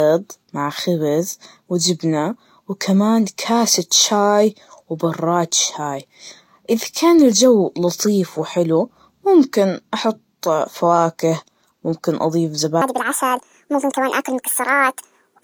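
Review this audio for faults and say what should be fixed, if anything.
The whole clip carries transcoding between lossy codecs: layered artefacts that sound like a low-bitrate HE-AAC pass later re-encoded to Vorbis, each stage smearing the last, with the lowest cut-off in the chain kept. Prevent it by encoding once from the original master, never from an already-compressed copy.

From 12.82 s to the end at 15.43 s there's a section at the wrong speed. The speech runs 1.64 times too fast, so it's hurried and pitched up roughly ten semitones, likely from a player or editor using the wrong sample clock. Prevent it by matching sample rates across every editing and playback step.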